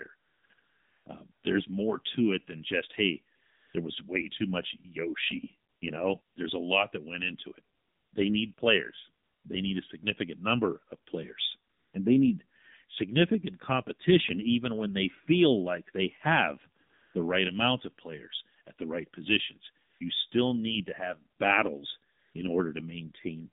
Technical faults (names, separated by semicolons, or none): AMR narrowband mobile codec; AMR comfort noise